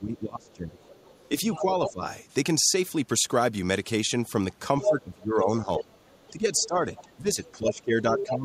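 From 0 to 0.89 s the speech is pushed down, by about 25 dB at its deepest. This is speech suppressed in double talk. The echo canceller likely could not tell the talker from the loudspeaker echo, so it ducked both. From 0.45 to 1.92 s the other side's voice leaks through, faint, about 20 dB under the speech, likely echo the canceller left behind. From 1.57 to 2.03 s the speech dips again, by about 15 dB, likely the same clash. From 4.8 s to the end it is ducked once more, about 15 dB at worst, likely from double talk. At 4.82 to 4.89 s a brief burst of the other voice leaks through at full speech level, likely uncancelled echo. From 5.77 to 8.25 s that voice leaks through, about 10 dB under the speech, likely residual echo.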